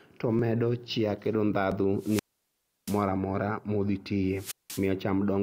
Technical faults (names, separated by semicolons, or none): dropped buffer (overrun); wireless microphone squelch dropout